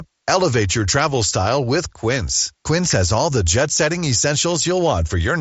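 At 2.90 to 2.94 s, a sharp snap sits on top of the speech. It lasts about 40 ms and may hold a tight cluster of clicks rather than a single one. This is an electrical switching spike. A nearby switch, motor or static discharge likely arced briefly, and the audio line picked up that burst. The snap is full-band within the headset path, which passes nothing above about 7.7 kHz.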